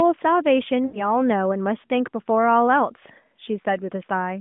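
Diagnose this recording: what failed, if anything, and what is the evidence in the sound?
Network failure: lost AMR speech frames. At 0.86 s the speech smears and fades as the decoder repeats the last good frame. It recovers weakly by 1.22 s.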